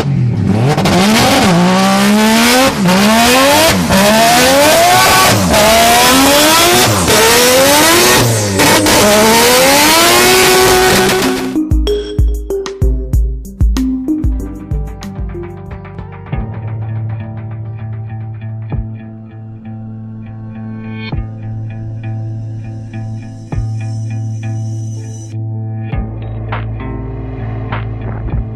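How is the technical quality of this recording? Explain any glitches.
No glitches to explain: nothing in the recording stands out as a technical fault.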